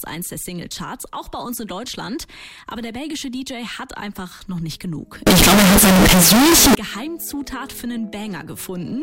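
From 5.27 to 6.75 s, the likely cause is signed and unsigned mixed up in 16-bit samples, flipping the top bit, so every zero crossing jumps across the whole range into loud, harsh distortion.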